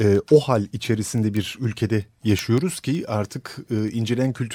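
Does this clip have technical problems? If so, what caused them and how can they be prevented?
Yes. Word clock ticks run through the speech from 0.15 to 4.53 s. They come roughly every tenth of a second, about fifty in all. The receiving device runs on its own clock, about 200 ppm off the sender's. Each slip drops or repeats one sample. Lock the receiver to the sender's word clock.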